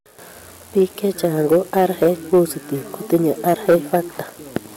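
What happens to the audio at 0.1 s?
Nothing goes wrong at 0.1 s: the speech there plays through intact, with no dropout, click or distortion.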